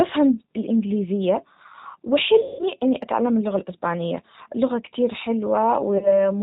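Throughout, the speech carries plainly audible G.729 codec damage: at 8 kbit/s the decoder rebuilds each frame from a filter, pitch predictor and a few pulses, so the sound is band-limited below 4 kHz and slightly rough and synthetic. This differs from plain low-pass filtering, which dulls without adding that buzz. From 2.41 to 2.64 s, VoIP packet loss concealed by the speech codec stretches the last sound into a fading buzzy tone or coloured noise over a 180 ms gap, which fits about six 30 ms packets. A smaller loss of one packet near 5.98 s leaves weak or distorted speech until 6.31 s, while frames rebuild. A smoothed, decaying sound like this, rather than silence or a click, marks codec concealment, not a simple dropout.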